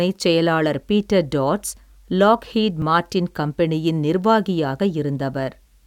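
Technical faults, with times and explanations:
2.82 s and 4.80 s, overlap between stream segments: at each point a short stretch of the speech is missing, roughly 18 ms at the first and 5 ms at the second, and the waveform jumps straight across the gap, so each is heard as a small click or skip. The segments appear to be about 2 s long. Where two segments' time stamps overlapped, the player discarded that overlap even though the audio in it was not actually duplicated.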